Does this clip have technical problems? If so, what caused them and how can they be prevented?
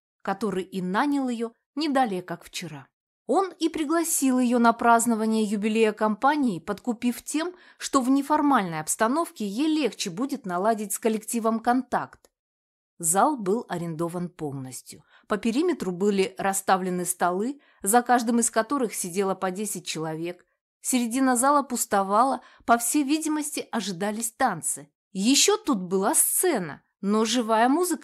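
No, nothing in this clip stood out as a technical problem on listening.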